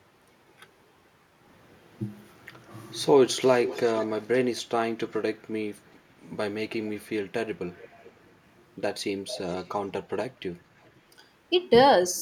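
A faint, delayed copy of the speech trails the original by about 435 ms at 3.64–4.1 s (clearest, roughly 15 dB down), 7.78–8.11 s (barely audible) and 9.28–9.7 s. This echo leak likely comes from a far-end loudspeaker whose echo canceller let some pickup return.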